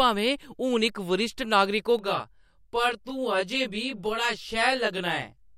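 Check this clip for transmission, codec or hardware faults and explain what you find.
One fault is present: channel delay (comb filtering). It starts at 1.99 s and runs to the end of the clip at 5.58 s. From that point one channel arrives roughly 20 ms behind the other, and the two are summed to mono. Whatever the channels share cancels at evenly spaced frequencies, starting around 20 Hz. The result is a fixed comb of notches. The speech turns rough and slightly doubled.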